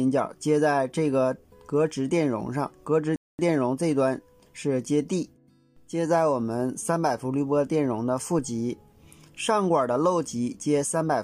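A rebuffering stall interrupts the audio from 3.16 to 3.39 s: the sound drops abruptly to silence for about 0.23 s and then picks up at exactly the point where it broke off. The gap comes from the player exhausting its store of downloaded audio and pausing playback until fresh data arrived. No material is skipped or repeated, but the playback runs about 229 ms longer than the original sound.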